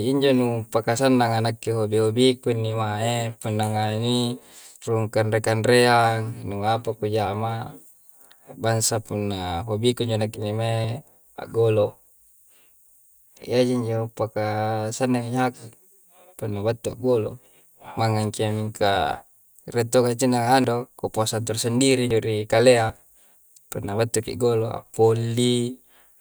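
Samples were likely not collected before the hardware overwrote them, a dropped buffer (overrun), so this speech skips ahead with a jump at 0.98, 10.84, 20.64, 22.11, 22.90 and 24.94 s, each losing a few tens of milliseconds without any silence.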